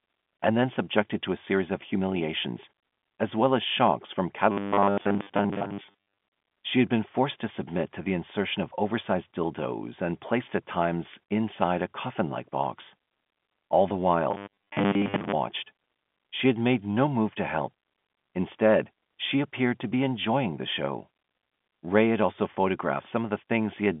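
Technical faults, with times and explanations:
4.52–6.18 s and 14.31–15.33 s: robotic sound from repeated short buffers. Audio likely arrived too seldom, so 10 ms chunks were replayed for most of each stretch, imposing a rigid, metallic 100 Hz buzz.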